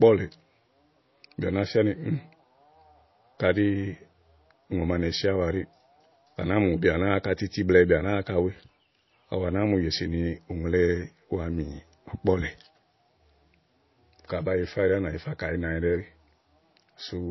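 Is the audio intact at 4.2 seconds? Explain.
No. MP3 compression is likely at work throughout, including 4.2 s. Starved of bits, the encoder removes everything above 5.8 kHz and flickers weak components, leaving a watery, swirly tone.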